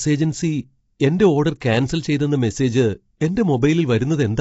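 Across the whole speech clip the sound is rough and grainy, with noise between the harmonics. Nothing reaches above 7.7 kHz. The damage is plainly audible. Its likely cause is low-delay AAC compression, AAC-ELD, at a rate that fits roughly 24 kbps.

At 1.6 s a brief hiss of about 14 ms arrives just before a sharp attack. This is pre-echo. The codec spread noise meant for the loud onset across its whole block, so it leaks ahead and softens the attack.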